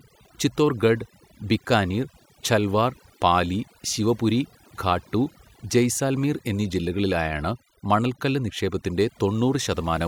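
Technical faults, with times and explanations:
Throughout: overdone noise removal. The noise reduction was set far too aggressive for this speech. Frequency bands near its noise estimate are cut hard, taking quiet speech detail with them. The background drops and breaks up into twinkling specks.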